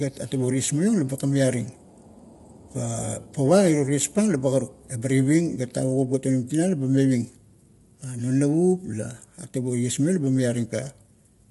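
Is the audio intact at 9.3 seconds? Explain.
No. At 9.3 seconds, as throughout the clip, the speech carries plainly audible low-delay AAC compression damage, likely from AAC-ELD. Its short frames resolve the voice's pitch harmonics poorly, so the voice sounds rough and grainy, with noise filling the gaps between harmonics. Nothing is present above 11.6 kHz, and the degree of damage points to a bitrate near 32 kbps, too low for this codec's low-delay framing to stay clean.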